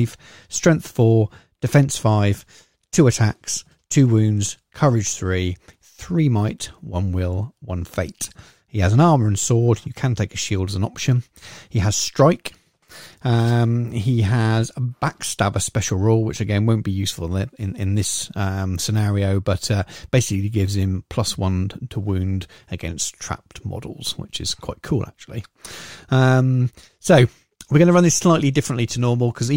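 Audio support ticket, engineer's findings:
No fault found in the speech audio for this ticket.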